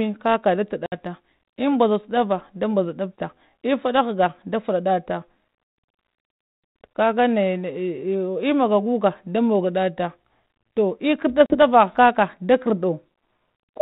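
Speech over what sounds like a 32 kbit/s G.726 ADPCM line, with two spots of packet loss: silent holes at 0.86 to 0.94 s (about 60 ms, a few packets' worth) and 11.46 to 11.57 s, right after "toh ekardda" (about 40 ms). Each time the decoder's predictor and step size lose sync, so speech resumes slightly distorted before settling.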